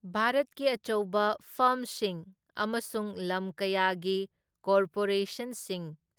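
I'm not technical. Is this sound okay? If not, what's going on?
Yes, nothing in this recording stood out as a problem when I listened to it.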